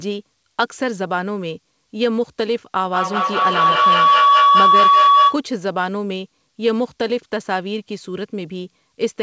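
Feedback howl from 2.81 to 5.44 s: a microphone-to-loudspeaker loop with a delay of about a fifth of a second gains level each trip, building a tone near 1 kHz that peaks about 8 dB above the speech.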